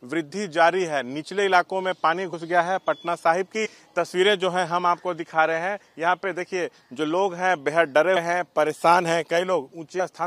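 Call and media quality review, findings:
Compressed frames skipped at 2.32 s, 3.65–3.67 s, 5.83 s, 8.15 s and 9.99 s: short jumps where the audio skips forward, dropping about 50, 100, 100, 150 and 50 ms respectively. Decoder/container path: whole 23.2 ms frames missing or rejected as damaged, a couple to around seven at a time, which fits 1024-sample frames at 44.1 kHz.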